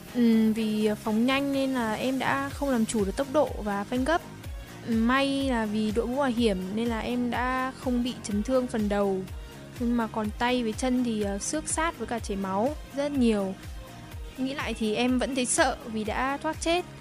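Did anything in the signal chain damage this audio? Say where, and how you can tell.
No, nothing along the chain seems to have done this audio any harm, and there's nothing here worth pinning to a stage or a timestamp.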